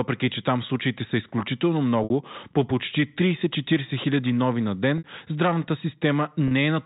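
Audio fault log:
2.04–2.10 s, 4.98–5.04 s and 6.48–6.51 s, packet loss with pitch repetition: the sound briefly holds on a slightly buzzy, frozen tone instead of moving on, first between "там случаите са изключително" and "по почти", then just after "хиляди нови на". The receiver bridged each gap, 60 ms, 60 ms and 30 ms, by looping the last pitch period, which fits two, two and one lost packets of about 30 ms. The narrow G.711 telephone band is audible in the repeats.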